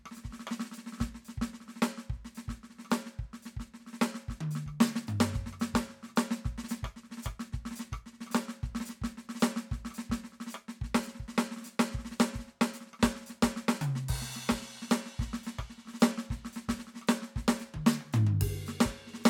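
Nothing in this music stood out as a technical problem on listening.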